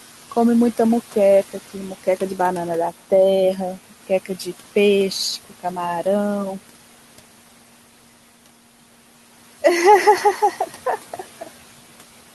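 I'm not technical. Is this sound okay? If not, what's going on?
No. The whole clip shows noise suppressor artifacts: a filter keeps turning the background noise down whenever nobody is talking and lets it back up under the talking. Ordinary room noise stays steady, but this noise keeps rising and falling with the speech.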